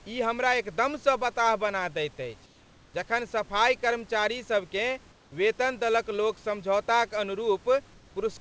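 Around 5.12 to 5.32 s, and again from 7.94 to 8.16 s, the room background gives way to a flat, featureless hiss, about 3 dB and then about 1 dB quieter. That's comfort noise in place of the background, likely from discontinuous transmission halting the audio during the pauses.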